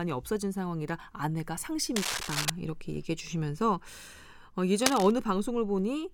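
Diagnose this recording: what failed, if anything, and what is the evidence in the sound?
Cable scratch noise appears twice in the speech, from 1.96 to 2.50 s and again from 4.78 to 5.11 s, each time as a dense, ragged burst of scratching and rustling that sits roughly as loud as the speech itself. The stage is the analogue wiring: most likely a worn cable, connector or control being moved, so its contact resistance jumps around rapidly and injects irregular noise straight into the signal path.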